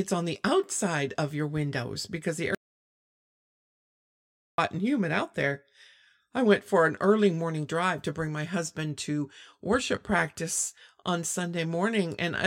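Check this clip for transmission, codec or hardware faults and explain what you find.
One fault appears, an audio dropout to silence. From 2.55 to 4.58 s, right after "your windows because the", the speech cuts out into about 2 s of dead digital silence with no room tone before resuming at "and humid out there". The input signal was likely lost while the recorder kept writing zeros, so that stretch is gone.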